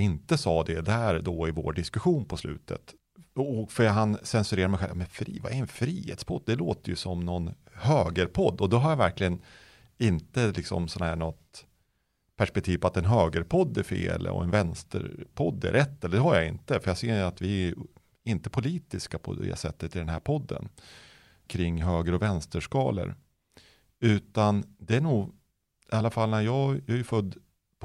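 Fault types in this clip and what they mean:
No technical faults can be heard anywhere in this speech recording. There is therefore nothing to list here.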